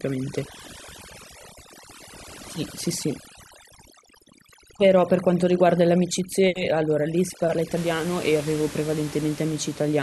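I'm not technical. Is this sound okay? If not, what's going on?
No. From the start until about 7.77 s, the noise reduction was set far too strong, a fault called overdone noise removal. It tried to clean away the room noise but cut out any slice of the sound that resembled that noise, taking the quiet parts of the voice with it. The pauses fall to near silence with small twinkling specks.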